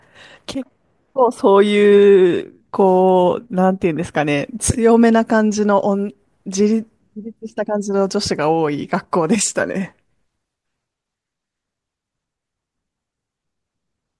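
No dropouts, clicks, distortion or level jumps turn up anywhere in the recording; no technical faults to report.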